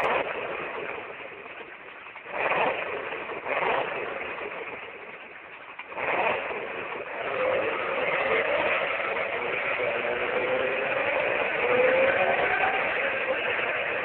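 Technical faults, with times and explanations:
0.59 s and 8.82 s, compressed frames skipped: the sound jumps ahead, by about one frame at 0.59 s and roughly a fifth of a second at 8.82 s, which fits dropping whole 26.1 ms frames.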